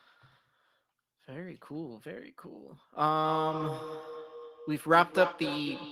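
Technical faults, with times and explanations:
3.14–5.92 s, feedback echo between two devices: from here to the end, the speech comes back at roughly 0.3 seconds, peaking at about 9 dB under the direct sound. A second device in the same room is playing out what this microphone sent, and the mic hears it again. The local echo canceller only subtracts its own playback, so that copy slips through and circles back at a steady interval.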